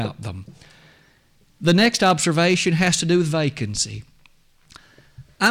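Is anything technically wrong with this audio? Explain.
Yes. Hard clipping appears from 1.67 to 3.16 s and again from 5.43 to 5.48 s. The speech is overdriven by about 7 dB, so peaks are cut flat. The flat tops add high harmonics, heard as distortion on louder sounds.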